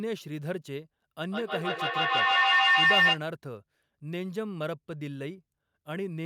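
From 1.26 s to 3.24 s a feedback howl takes over the speech. Sound from a loudspeaker is reaching a microphone on the same call and going round again with gain on each pass, so the repeats swell instead of dying away and narrow to a tone near 2 kHz. That tone peaks about 11 dB above the speech, and the loop repeats roughly every 150 ms. An ordinary echo fades; this one grows until it stops.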